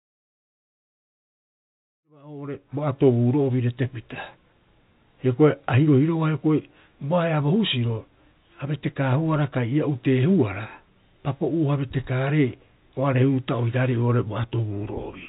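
Nothing in this speech recording is technically at fault: it carries the band-limited sound of a phone-grade call path, with nothing above 4 kHz, which fits 64 kbps G.711 mu-law, and the level rises in a smooth, deliberate fade-in from around 2 s that reaches full level at 3.33 s.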